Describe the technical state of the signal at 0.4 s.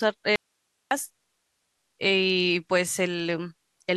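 At 0.4 s the signal is inside an audio dropout to a faint residue, running from 0.36 s to 0.91 s, about 0.55 s in all. The speech cuts out abruptly and the gap holds only hiss, roughly 50 dB below the normal signal level, before the speech returns just as suddenly. The likely cause is a break in the wanted signal while the downstream path stayed live, so only its own noise floor passed through.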